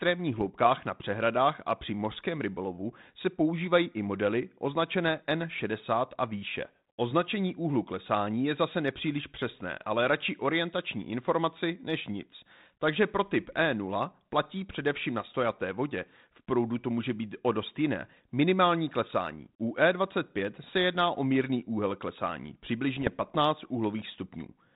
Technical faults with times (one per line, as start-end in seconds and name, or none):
0.38-0.42 bit errors on an ADPCM link
22.94-23.31 bit errors on an ADPCM link